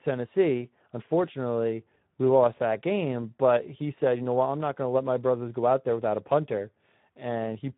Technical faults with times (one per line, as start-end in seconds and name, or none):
0.00-7.77 Speex codec